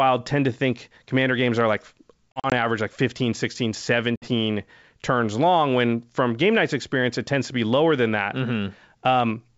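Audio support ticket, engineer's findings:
Packet loss on ADPCM call, 2.34–2.53 s, between "commander games are like" and "average like". About 100 ms of silent gaps scattered over 200 ms, longest 40 ms, fitting a handful of dropped packets. Decoder predictor and step size lose sync, so the audio resumes slightly distorted.

Second packet loss at 4.16–4.29 s: about 60 ms silent, around three packets' worth. Same hard-edged hole, then a distorted restart settling within tens of ms. The G.722 64 kbit/s wideband path is heard clean underneath.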